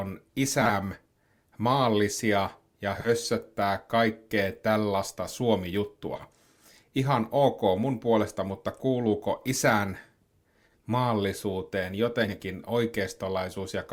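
Frames out of order: neighbouring 40 ms runs of frames were decoded in swapped order at 0.61, 2.96 (just after "maallisia ja"), 6.16, 9.37, 10.66 and 12.24 s. Each short stretch of speech plays with its halves exchanged, as a garbled flutter, and no time is lost.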